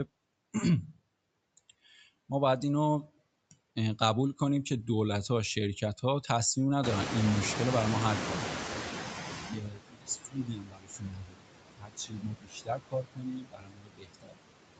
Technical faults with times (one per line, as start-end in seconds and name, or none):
0.00-14.79 noise suppressor artifacts
6.83-9.69 noise suppressor catching up
9.33-11.50 speech cut by the noise suppressor
11.77-14.40 speech cut by the noise suppressor